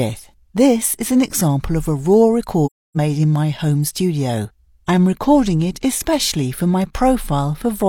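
AAC frame loss with muting breaks the audio from 2.66 to 2.97 s: a run of encoded frames never reached the decoder, which zeroed their spectral content rather than concealing it. The result is a gap of about 0.3 s, which fits roughly seven consecutive lost frames. Because each AAC frame overlaps its neighbours, the sound fades out gradually going into the gap and fades back in coming out, giving the hole soft rather than abrupt edges.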